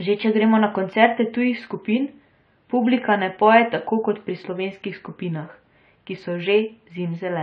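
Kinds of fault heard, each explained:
AAC compression: likely low-bitrate encoding, around what a 32 kbps stream would give, has thinned the spectrum, leaving the speech dull and smeared with a fizzy, warbling edge on sibilants.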